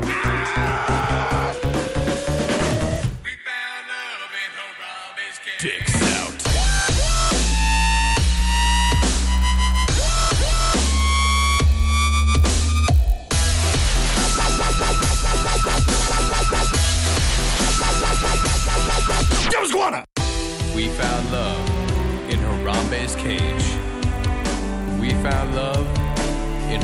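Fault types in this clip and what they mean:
Resampler restarted on every block: each 20 ms block was converted in isolation, leaving a small error at every block edge. It is heard as a 50 Hz buzz present only with signal. A spectrogram shows thin vertical lines every 20 ms, and the waveform shows small steps at each boundary.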